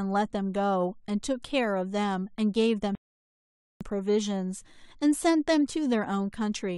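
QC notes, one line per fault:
2.95–3.81 s, rebuffering stall: the speech stops dead and falls to silence for about 0.86 s, then picks up at exactly the point where it broke off. Nothing is skipped, but the clip gains that much time because playback ran short of downloaded data and waited for more. On the waveform it shows as a flat line between two abrupt edges. On a spectrogram it is an empty vertical gap across all frequencies, with no smearing on either side.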